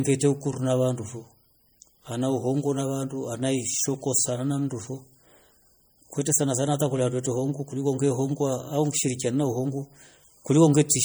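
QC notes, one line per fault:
Throughout, MP3 compression: the speech has a plainly audible watery, swirly texture as weak frequency components flicker on and off from frame to frame, though content still reaches 21.1 kHz. The damage fits a starved bitrate near 48 kbps, likely from MP3 encoding.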